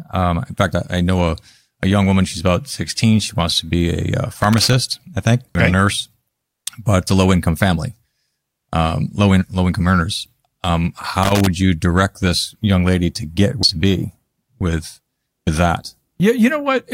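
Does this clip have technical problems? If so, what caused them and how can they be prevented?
Yes. Loose connector crackle at 4.42 to 4.73 s, just before "I think", and at 11.23 to 11.47 s, just before "you direct this young": a worn or dirty contact keeps making and breaking, chopping the signal into irregular scratchy bursts. Clean, reseat or replace the cable and connectors before recording.

Damaged data in a compressed stream at 5.55 s, between "I think" and "okay a nurse", and again at 13.63 s: corrupted bytes make the decoder lose sync and hunt for the next frame, giving a brief blip. Transfer and store files with checksums, and re-copy from a clean source.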